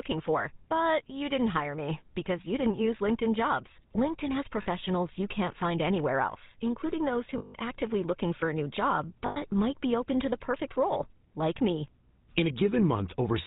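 Throughout, the speech has a buzzy, gravelly roughness and no content above 4 kHz. This is the GSM full-rate codec, whose damage is plainly audible. At a rate that fits 13 kbps, it rebuilds the voice from a vocal-tract model driven by sparse, regularly spaced pulses.

At 4.62–4.68 s, 7.38–7.55 s and 9.26–9.37 s, the sound freezes into a rough, metallic ring lasting 40, 160 and 100 ms. These are lost GSM frames. Each gap was filled by repeating the last good frame.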